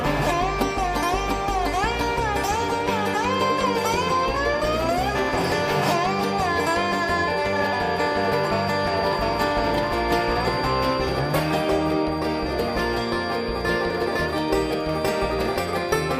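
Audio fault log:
3.24 s to the end: feedback whistle. A thin, steady 4.7 kHz tone sits roughly 20 dB under the sound and swells and fades slowly in level, likely from a loudspeaker-to-microphone loop held just at the edge of feedback. Unlike a runaway howl, it never builds in loudness.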